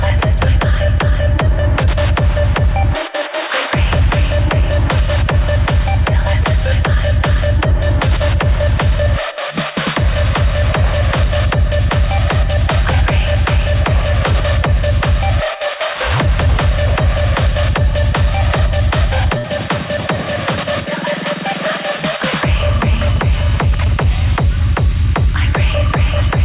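At 19.38 s the audio stops moving forward for about 80 ms, until 19.46 s, a burst of packet loss. The receiver filled about 58 ms by stretching the last sound and letting it fade, so a held buzz or dwindling hiss replaces the real material. When playback resumes, about 60 ms of audio is gone. Unlike a plain dropout to silence, the gap is papered over with a decaying copy, and unlike a stutter, nothing repeats afterward.

From 21.51 s to 24.03 s come GSM signalling bursts: a galloping dit-dit-dit of short buzzes at 217 Hz, sitting roughly 15 dB below the main sound. This is the rectified radio output of a nearby 2G phone exchanging signalling rather than carrying a call, which explains the irregular grouped rhythm. A steady mains hum would drone continuously, and a ground-loop buzz would not come in clustered bursts like these. The band ends at 4 kHz, which fits a 64 kbit/s G.711 call path.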